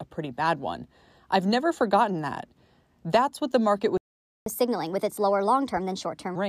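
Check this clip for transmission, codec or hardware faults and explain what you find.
Two linked playback faults are audible in this speech clip: a stall followed by a sped-up recovery.

Playback stall, 3.97 to 4.46 s: the speech cuts out in mid-flow and the output stays completely silent for about 0.49 s. The likely cause is the player running out of buffered data or having its output thread blocked. A codec dropout or lost packet typically leaves a brief gap, often masked by concealment. This gap is a clean, extended silence, and it leads straight into the catch-up that follows.

Catch-up at higher speed, 4.46 to 6.36 s: as soon as sound returns, the speech runs at 1.25 times normal speed and sits about four semitones higher. The player is resampling its backlog to recover the time lost in the stall, so tempo and pitch rise together and then settle back to normal. A pure pitch-shift or formant fault would change pitch without changing pace. 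Here both change at once, only for this stretch, right after the silence.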